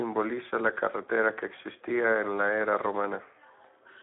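A Speex codec runs for the whole clip, coding the speech through a narrow line band of roughly 250 Hz to 3.5 kHz, with nothing at all above 3.8 kHz. The degree of damage points to a low setting, around 11 kbps, which leaves the CELP coder short of bits for the excitation signal. The speech comes out thin and boxed-in, with a plainly audible hoarse, noisy roughness.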